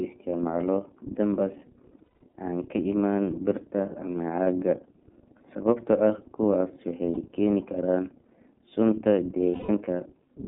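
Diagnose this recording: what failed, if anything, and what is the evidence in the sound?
The codec stage is at fault. This speech is held to a 200 Hz to 3.5 kHz telephone band, with nothing above 4 kHz, and carries a plainly audible rough, slightly synthetic edge. That points to the iLBC codec at about 13.33 kbps with 30 ms frames. Unlike a simple band-limiting filter, it coarsens the waveform itself.

The network dropped packets, causing lost iLBC frames. At 1.98 to 2.33 s, losses are scattered across about a third of a second, with the longest run near a fifth of a second. Shorter 30 ms gaps fall at 4.44 to 4.47 s and 7.13 to 7.21 s, and a 180 ms one at 9.51 to 9.70 s. Each sounds like a held, buzzy or breathy vowel because the decoder repeats the last pitch cycle mixed with noise. Unlike dropouts or clicks, nothing goes silent, and the voice recovers immediately afterwards because iLBC frames decode independently.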